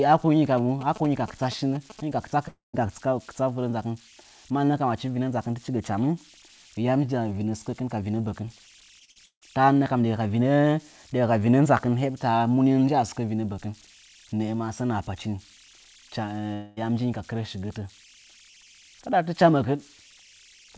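Across the whole speech clip runs a faint, steady whistle around 3 kHz with a grainy texture beneath the quieter passages, about 29 dB below the speech. These are converter idle tones: an undithered delta-sigma converter, fed very small input, settles into repeating bit patterns that produce a fixed tone instead of random noise. The tone sits well inside the call path's bandwidth, which carries nothing above 8 kHz, so the band limit does not remove it.

From 0.58 s to 2.01 s, just before "hɨnyi ka kɨtsa", a galloping dit-dit-dit of short buzzes appears, about 15 dB below the speech. These are GSM signalling bursts from a nearby 2G handset. Its transmitter pulses in groups at the 217 Hz frame rate, and the audio circuitry rectifies that radio energy into the buzz heard here, independent of what is being said.

Right after "hɨnyi ka kɨtsa", from 2.48 s to 2.75 s, the sound smears into a decaying buzz for roughly a quarter second, falls silent for about 150 ms, then resumes with about 260 ms of material skipped. 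This is a long network dropout, likely caused by a stall in packet delivery. The receiver extended the last received sound until it faded, and playback picked up later without the lost portion.

Between 8.99 s and 9.43 s the speech turns choppy and metallic. This is repeated packet loss producing robotic sound. Four separate gaps, the longest 159 ms, hit in quick succession, and about 240 ms of audio is missing. Concealment fills 55% of that span by stretching whatever came before each hole. Because real audio never returns for long between the holes, the patched fragments run together into a mechanical, stuttering texture.

From 16.53 s to 16.79 s, just before "yam njinyi ka", another long network dropout occurs, likely from a second delivery stall. This time there is no silent stretch. About 231 ms of fading buzz covers the gap and runs straight into the resumed speech, with roughly 240 ms of original audio absent. 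The lost material is not recovered.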